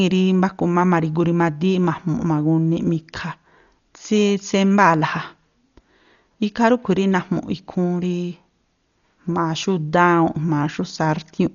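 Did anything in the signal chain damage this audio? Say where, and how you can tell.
Yes, at the codec stage: dull speech throughout, sharply cut above 7 kHz, with rough, fluttering noise around tones, likely heavy Dolby Digital compression at a very low bitrate. A spectrogram shows a flat ceiling and speckled noise-filled bands.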